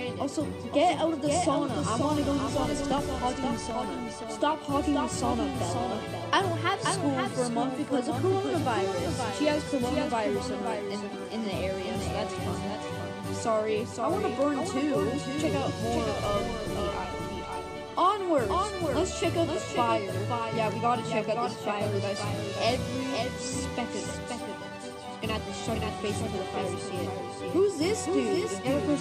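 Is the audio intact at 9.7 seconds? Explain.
No. At 9.66 s, compressed frames are skipped. About one frame of audio, roughly 20 ms, fits a 23.2 ms frame. The jump leaves a brief smeared blip, not a hard click. A doubled audio track also runs through this moment. A full-band copy trails by about half a second, a few dB quieter, with no room colour. It is likely from a second, slower capture path.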